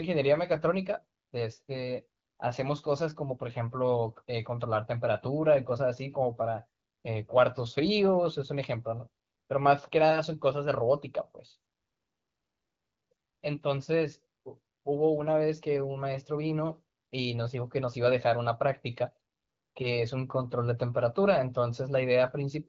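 No technical faults can be heard in this speech recording.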